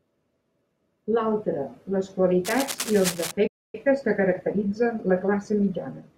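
Cable scratch noise runs from 2.45 to 3.31 s: a dense, ragged layer of scratching and rustling over the speech, roughly 10 dB below it. Its uneven, crackly texture points to a worn cable, connector or control being moved, most likely changing its contact resistance rapidly so that bursts of noise are added to the signal for just under a second before it clears.

A playback stall follows from 3.47 to 3.75 s, where the speech stops dead in mid-flow for about 0.26 s of silence. It sounds like the player likely ran out of data or had its processing thread blocked, so nothing reached the output until it recovered and resumed.

Time-compressed catch-up runs from 3.75 to 6.05 s, right after the stall. The speech comes out about 1.1 times faster than normal, yet its pitch is unchanged. This is the player working through the backlog built up during the silence: it removes short slices of audio and cross-fades across the joins, which hurries the delivery.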